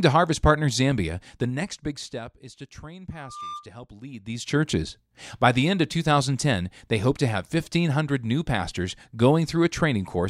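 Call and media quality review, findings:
Zipper noise, 1.16 to 2.44 s, then 4.12 to 4.6 s. Gain control stepping without smoothing. 2 dB steps, each a small click. About 20 dB down at roughly seven steps a second, then about 20 dB up, much faster.

Loudspeaker feedback squeal, 3.11 to 3.70 s. A single 1.2 kHz tone. It swells over roughly a third of a second to about 5 dB above the speech. Mic picking up its own loudspeaker, with loop gain above one at that frequency.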